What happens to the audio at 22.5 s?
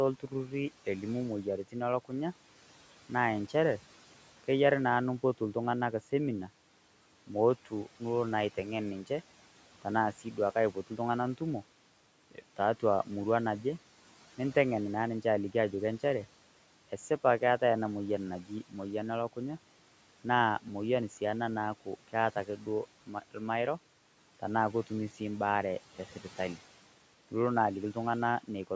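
Right after "ena naaku keata", from 22.46 to 22.67 s, the speech briefly sounds swallowed and faint, dipping by about 8 dB: speech cut by the noise suppressor, which mistook it for background.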